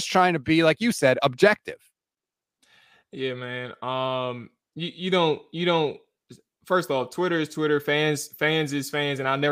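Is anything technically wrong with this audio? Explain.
No, there's nothing technically wrong here that I can hear.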